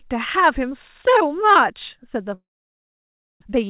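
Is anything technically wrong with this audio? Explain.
Yes. There are two faults, close together near the end.

Long network dropout, 2.34 to 3.44 s. The last sound is stretched into a brief buzz that fades out. Near-silence then fills most of the gap, close to a full second. When the audio resumes, about 0.6 s of it is simply gone. The likely cause is that packets stopped arriving. The receiver first disguised the gap, then gave up and played silence. The stream picked up later, skipping the lost part.

Jitter buffer speed-up, 3.45 to 3.64 s. Right after the return, the audio rushes. It runs at about 162% speed, but the pitch stays put. The delayed packets arrived in a bunch, so the buffer held more audio than it aims for. To catch up, the receiver cut out short pitch-period slices again and again. Together they come to about a tenth of a second. The result sounds hurried. All of this passes through a G.711 mu-law call path, so nothing is heard above 4 kHz.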